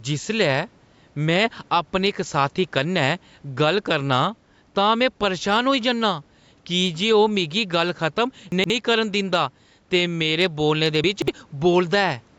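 Gain pumping runs through the whole clip. The level swings by a few decibels, squashing loud and soft parts closer together. Gain set too high into a fast limiter is the likely cause.

Chunks out of order appear from 8.52 to 8.70 s and from 11.04 to 11.28 s. A 60 ms chunk plays two, then three, chunks late. Each spot sounds jumbled.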